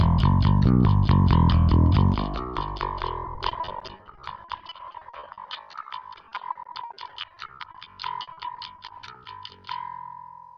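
Repeated packet loss (robotic sound) runs from 3.25 to 9.25 s: dozens of gaps up to 60 ms, about a quarter concealed, sounding choppy, with smeared, stuttering spectrogram bands.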